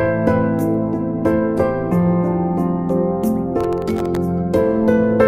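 Processor overload crackle runs from about 3.6 to 4.17 s, a gritty tearing laid over the audio that stops once the load eases. The processor fell behind on its very short buffers, each well under a millisecond, and missed around twenty deadlines over that stretch. Each miss replayed a scrap of old audio with hard edges instead of fresh signal, and that rapid string of clicks fuses into the crackle.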